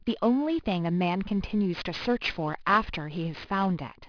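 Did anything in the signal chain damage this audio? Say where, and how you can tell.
Yes, at the sample-rate conversion: aliasing throughout. Resampling from 24 kHz to 11 kHz skipped the anti-alias filter, so sibilant energy above 5.5 kHz folds back as gritty, metallic tones, roughly 20 dB below the speech.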